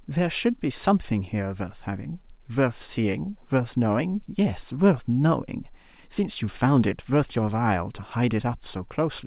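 There are no technical faults to describe in this speech.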